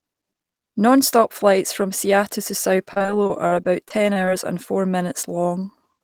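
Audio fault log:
2.93–4.29 s, repeated packet loss (robotic sound): the stream repeatedly lost or received late packets, and each hole was patched by extending the preceding sound. The choppiness points to about a dozen gaps, none longer than 41 ms, with roughly a fifth of the stretch (about 0.25 s) filled in. That recycled material gives the speech a choppy, robotic quality with fragments missing, clearing just before "and four".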